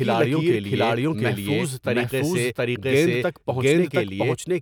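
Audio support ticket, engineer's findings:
Doubled audio track, whole clip: full-band copy of the speech trailing by around 0.7 s at about equal level, no decay or room colour. Waveform shows every phrase repeated at that offset; spectrogram shows identical patterns shifted in time. Likely a second capture path or an out-of-step duplicate in the edit.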